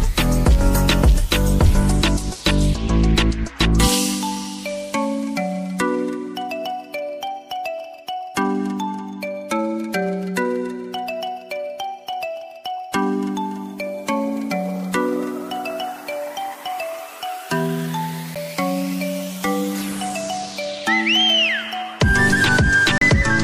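Two brief dropouts to silence interrupt the sound, a Bluetooth stall at 18.35 s with a gap of about 9 ms and another from 22.98 to 23.02 s lasting about 34 ms. Playback then resumes. The likely cause is interference delaying packets until the receiver's buffer emptied. On a waveform each shows as a flat, near-silent notch; on a spectrogram, a thin vertical blank strip across all frequencies.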